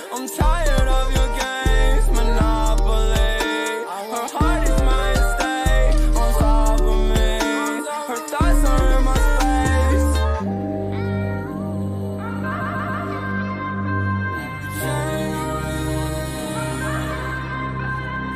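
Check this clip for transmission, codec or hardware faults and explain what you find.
One fault is present. From 12.60 to 13.02 s there are repeated frames. A 139.3 ms block, fitting a short run of compressed frames, plays three extra times. This stutter adds 418 ms.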